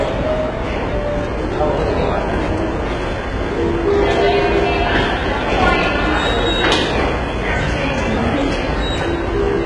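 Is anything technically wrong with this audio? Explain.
Yes. Throughout, the treble is gritty and metallic, and it stops at 11 kHz. This points to heavy HE-AAC compression, likely at a very low bitrate around 12 kbps, with the upper band copied up from lower bands.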